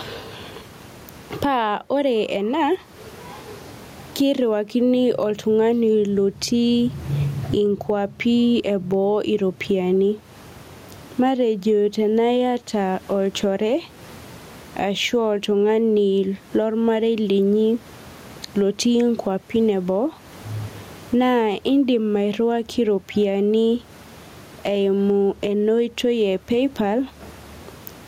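Gain pumping runs through the whole recording. The room noise sits about 39 dB below the speech. The swing is around 20 dB. The likely cause is input gain set far too high, with a fast limiter or compressor clamping it on each peak. Loud and soft passages end up squashed together.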